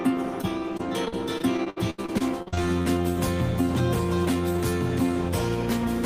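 The audio breaks up with repeated packet loss (robotic sound) from 0.41 s to 2.87 s. Over that stretch, more than a dozen short holes follow one another closely. The longest lasts 78 ms. Each hole is patched by stretching the last good sound forward. About a fifth of the span is this patched sound. Roughly half a second of the original is missing outright, so the sound is choppy.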